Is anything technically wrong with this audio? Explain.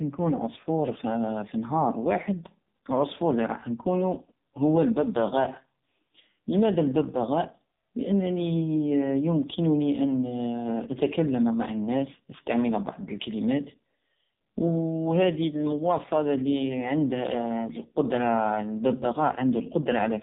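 Yes. For the whole of the speech, the AMR narrowband mobile codec has left a heavy, phone-like imprint. Nothing reaches above 4 kHz, so sibilants lose their edge. The voice comes out buzzy and synthetic because the codec rebuilds it from a vocal-tract model fed by a few pulses per subframe, which fits one of its lowest bit-rate modes, around 5 kbps. A plain low-pass filter would dull the top end without adding that buzzy, artificial texture.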